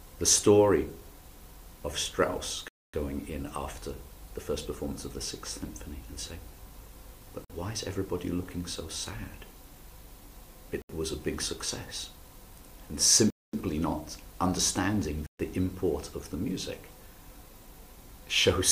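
The sound drops to silence five times: 2.68 s for 0.25 s, 7.45 s for 0.05 s, 10.82 s for 0.08 s, 13.30 s for 0.23 s, and 15.26 s for 0.13 s. Each gap is a clean cut, then the sound resumes. This points to a Bluetooth stall. The likely cause is radio interference delaying packets until the headphone buffer emptied.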